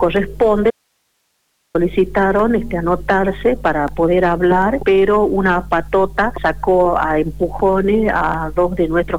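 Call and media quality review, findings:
Abrupt cut to faint hiss around 50 dB down, 0.71–1.75 s. Audio dropout to a faint residue; source signal likely lost while the downstream path stayed live.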